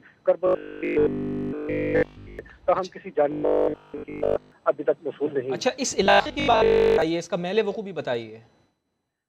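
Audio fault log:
0.47–2.39 s, 3.32–4.52 s and 6.06–7.02 s: robotic sound from repeated short buffers. The sound turns into a hard, metallic buzz with a fixed pitch of 50 Hz. That pitch matches a 20 ms slice played again and again, so new audio is likely arriving too slowly and the gap is filled with repeats. The first run is repeated almost entirely. The later two are mostly repeats, with some real audio still coming through.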